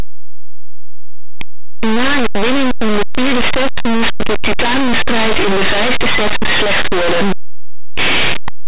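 From the first moment to the end, the speech is buried in harsh, very loud distortion. It's linear audio read as companded: plain linear 8-bit samples have been pushed through a mu-law expander as if they were G.711 codes. Small values sitting just to one side of zero land on the biggest expanded outputs, while their neighbours on the other side stay tiny. So even quiet stretches blast out as a loud, rasping roar rather than near silence.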